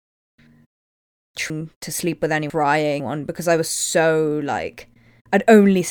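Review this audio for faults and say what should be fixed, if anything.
Chunks out of order between 1.5 and 3.0 s: one 500 ms chunk of speech was delivered or written two chunks late, so the two chunks meant to follow it played first and the late one came after them. Nothing is missing, but that stretch sounds jumbled, with three hard joins where mismatched segments meet, just before "because I was so". Tagging each chunk with a sequence number and reordering in a jitter buffer before playback or writing would prevent this.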